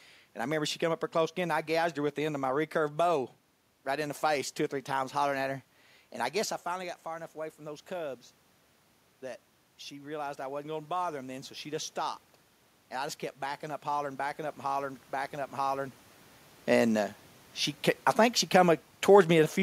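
From 9.21 to 11.96 s, automatic gain rising: after the input dropped about 12 dB, the gain control lifted about 4 dB, swelling the speech and room noise together.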